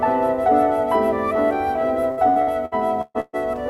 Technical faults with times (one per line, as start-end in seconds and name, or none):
2.11-3.36 repeated packet loss (robotic sound)